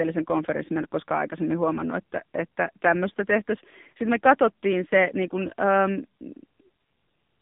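Throughout, the speech sounds buzzy, synthetic and boxed-in, with nothing above 3.7 kHz: heavy AMR-NB narrowband mobile codec damage, consistent with a low rate near 6.7 kbps.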